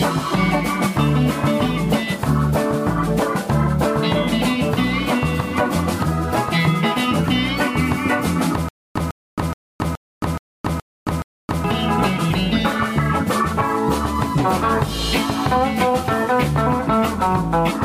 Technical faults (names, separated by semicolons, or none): stutter with silent gaps